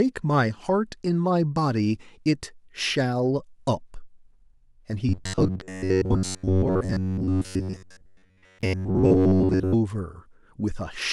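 From 5.09 s to 9.75 s, the speech takes on a robotic sound from repeated short buffers. A rigid, metallic buzz sits at about 94 Hz. The sound follows the original speech only roughly. The likely cause is audio arriving too seldom. The software then loops the last fragment of about 11 ms, which fits the 94 Hz buzz. About 70 percent of this stretch is repeated material, so real audio is skipped.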